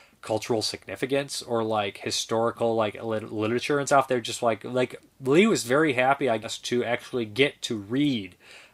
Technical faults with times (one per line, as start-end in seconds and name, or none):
3.89 compressed frames skipped
6.43-6.47 compressed frames skipped